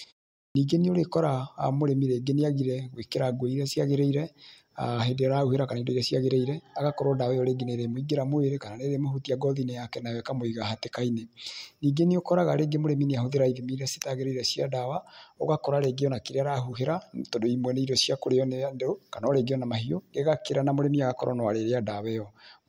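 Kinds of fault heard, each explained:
Clipped start after a pause: the output device sleeps through the 0.46 s of silence at the start and must wake before playing again. The first 52 ms of speech, from 0.50 to 0.55 s, is lost, so the opening word begins abruptly without its first sounds.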